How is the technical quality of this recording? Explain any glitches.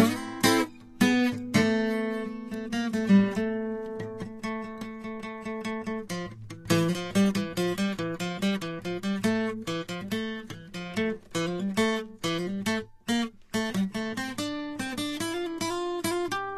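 The quality is fair at best. Lossy coding damage is plainly audible from start to finish.

The whole piece of music carries what sounds like Vorbis compression, likely at a low setting. Nothing comes through above 14.1 kHz, and the treble just under that limit is grainy and hissy. At low rates the encoder quantises the high-frequency detail so coarsely that it turns into noise of similar energy. Sustained tones come out roughened, and attacks sound blurred. That fits a bitrate of around 31 kbps.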